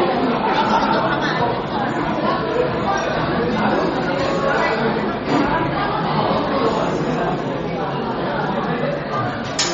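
All the way through, the top end stops dead at about 8.1 kHz, and the sound has a watery, swirly texture. That's likely MP3 compression, with the treble cut and weak frequency lines flickering between frames, which fits a starved bitrate of around 32 kbps.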